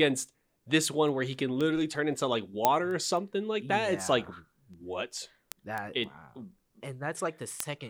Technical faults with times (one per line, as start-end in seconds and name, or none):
0.30-7.86 word clock ticks